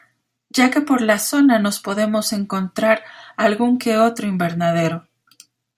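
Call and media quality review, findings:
No audible faults found in this speech recording.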